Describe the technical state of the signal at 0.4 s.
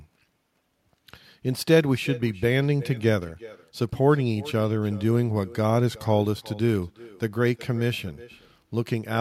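At 0.4 s the speech carries echo with no canceller, present from start to end. The far end's loudspeaker output reaches its microphone and returns unremoved, so each phrase is trailed, roughly 400 ms later, by a thin copy about 20 dB quieter.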